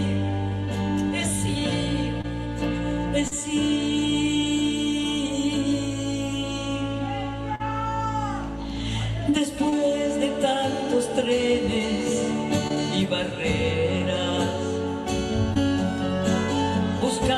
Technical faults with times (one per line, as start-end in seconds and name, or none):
2.21-2.26 short concealed packet loss
3.28-3.33 short concealed packet loss
7.55-7.61 short concealed packet loss
9.69-9.74 short concealed packet loss
12.68-12.72 short concealed packet loss
13.98-14.02 short concealed packet loss
15.54-15.58 short concealed packet loss